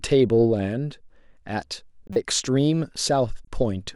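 At 2.07 to 2.16 s, a corrupt frame was decoded, probably about three in a row. Flipped bits gave wrong gains and codes. Energy lands at false frequencies. A loud squeak results. At 3.45 to 3.48 s, a much fainter blip follows.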